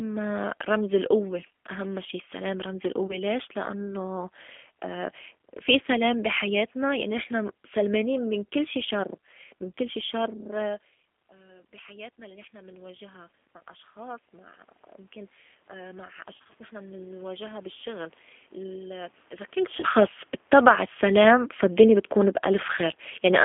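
Throughout, the speech carries G.729 coding: nothing passes above about 3.4 kHz or below 200 Hz, and the 8 kbit/s model of a vocal tract filter plus a few pulses per frame leaves an audible roughness and a slightly synthetic texture.

At 3.07 to 3.17 s, between "أهمّا شي السّلام رمز" and "ليش لأنّو", VoIP packet loss concealed by the speech codec appears. About 20 ms of audio went missing, and the decoder filled it by repeating its last pitch and filter at falling gain. This gives a brief stretched, fading smear, and the voice sounds weak for a moment after real packets resume.

From 16.38 to 16.54 s the same concealment recurs, this time as several short gaps scattered over about 160 ms, the longest around 30 ms. The result is a stuttering blur across that stretch, with the level dipping and recovering unevenly because each rebuilt frame depends on the one before it.

From 19.57 s to the end, automatic gain falling pulls the level down by about 8 dB. 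The control eased its gain back gradually, so the voice and the background sink together. This is separate from the talker's own movement near 19.5 s.

Inside that fade, at 19.80 to 19.85 s, another packet loss concealed by the speech codec covers about 30 ms. It produces a short stretched hold on the sound before normal decoding returns.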